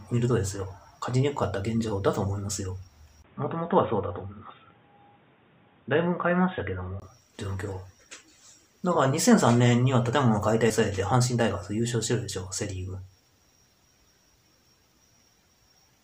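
The input most likely switched to a poorer capture device from 3.22 to 7.02 s, either another microphone or a headset's call profile. That device passes a narrower band, so nothing above 3.7 kHz gets through and the audio turns dull and boxy, then clears again at 7.02 s. A 20 ms silence marks the switch. The new device brings its own background noise, sitting well below the signal, while the overall level stays about the same. At 10.69 s, compressed frames were skipped: a couple of frames were either missing from the file or rejected by the decoder as damaged. Playback jumps ahead by around 40 ms of audio, leaving an audible discontinuity at the join where the material on either side meets without the missing stretch.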